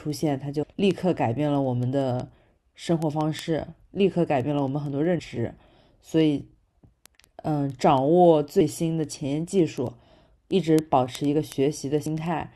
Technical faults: word clock ticks; damaged data in a compressed stream

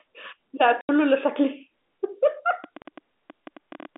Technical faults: packet loss filled with silence; train of clicks

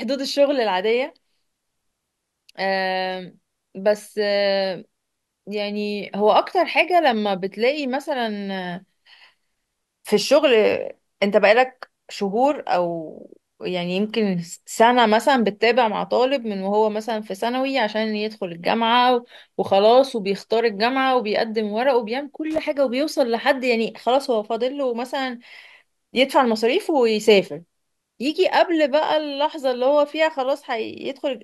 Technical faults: loose connector crackle

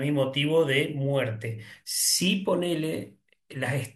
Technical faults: none

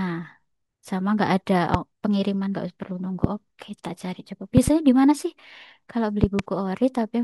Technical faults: loud pop

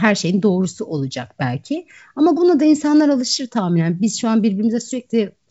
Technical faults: none

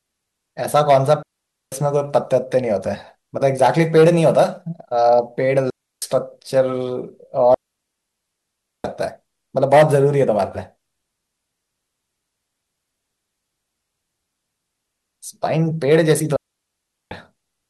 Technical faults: digital wireless dropout

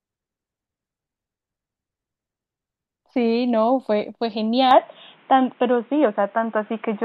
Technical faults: input switched to a poorer device

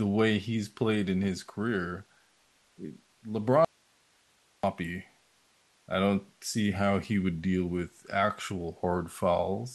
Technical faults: audio dropout to a faint residue

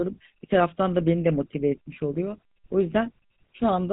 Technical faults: GSM full-rate codec

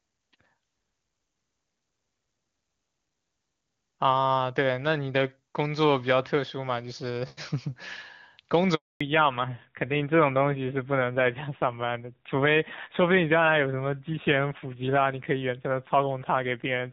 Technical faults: handover gap; fallback to narrowband

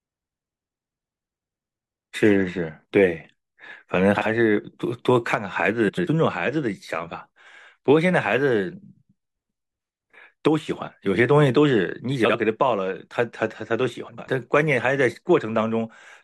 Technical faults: frames out of order

